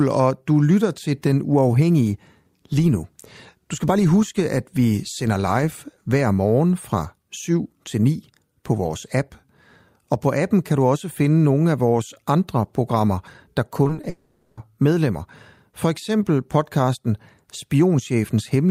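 From 13.83 to 14.05 s, just after "vores andre programmer der", the speech breaks up with repeated packet loss, giving a robotic sound. Four short holes, none longer than 20 ms, are each patched by stretching the preceding audio, so about 80 ms of the 0.22 s stretch, roughly a third, is synthetic. The repeated patching gives the speech a choppy, robotic texture with small pieces missing.

Immediately afterwards, from 14.09 to 14.59 s, a half-second gap is heard, likely a long network dropout. No fresh audio is played for about 480 ms. Instead the last received sound is extended as a fading fill that covers the whole gap without dropping to silence. When the speech resumes at 14.59 s, the material from that half second is simply absent rather than delayed.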